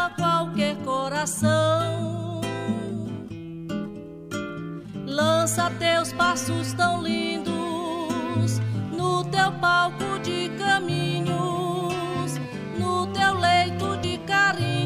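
At 14.03 s, damaged data in the compressed stream produces a brief glitch: corrupted bytes make the decoder misread a frame and lose sync until it finds the next header. A spectrogram shows a thin vertical smear of mismatched energy; the waveform shows a short discontinuity.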